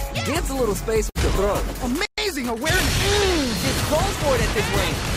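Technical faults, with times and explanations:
1.09–1.18 s, burst of packet loss: the sound briefly freezes into a held, fading sound for roughly 55 ms, then jumps ahead as if about 60 ms had been skipped. A short run of consecutive packets never arrived in time. The receiver concealed the gap by continuing the last waveform and turning it down, and when real data returned, playback resumed at the later point, leaving the audio in between missing.
2.05–2.18 s, playback stall: the sound cuts out abruptly mid-flow and there is silence for about 124 ms before it picks up again. The output simply had nothing to play for that stretch. This is likely the player running dry of buffered data or its audio thread being briefly blocked, so it produced silence until it recovered.
2.18–3.00 s, time-compressed catch-up: right after the dropout the audio sounds hurried, running about 1.15 times normal speed while keeping its normal pitch. 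Having fallen behind during the stall, the player shortens its backlog by cutting out small slices and cross-fading the joins. That speeds the material without shifting pitch.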